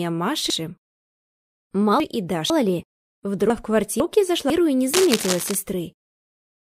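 Two passages of chunks out of order jumble the audio between 0.5 and 2.5 s and again between 3.5 and 4.5 s. A 500 ms block plays three chunks late in the first span and one chunk late in the second, leaving abrupt waveform discontinuities at the joins. From 4.93 to 5.55 s, cable scratch noise adds dense, uneven rustling at about −5 dB relative to the signal, likely from a worn cable or connector being moved. It shows as ragged broadband smearing on the spectrogram and fuzzy, irregular spikes in the waveform.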